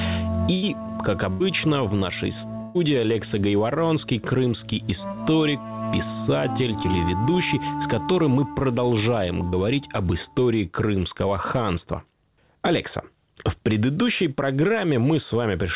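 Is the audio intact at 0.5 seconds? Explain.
No. Just after that point, from 0.54 to 0.64 s, there is a burst of packet loss: a run of audio never arrived in time, so the receiver stretched the last sound it had for roughly 83 ms, fading it into a held buzz or hiss, then resumed with about 80 ms of material skipped. Unlike a plain dropout, there is no silent hole; the sound carries on, smeared, and the content jumps forward. The 4 kHz ceiling of the G.711 call path persists throughout.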